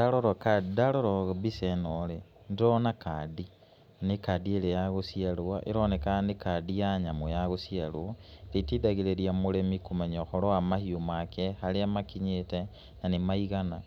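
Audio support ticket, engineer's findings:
No faults found on listening; no dropouts, clicks, distortion or level anomalies heard in the speech, nothing to escalate.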